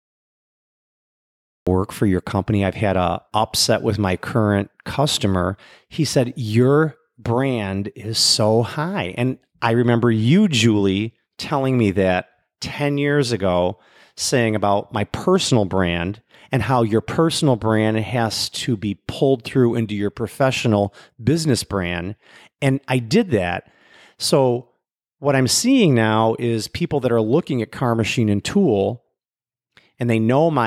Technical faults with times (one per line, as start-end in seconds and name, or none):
0.00-1.67 cut-off start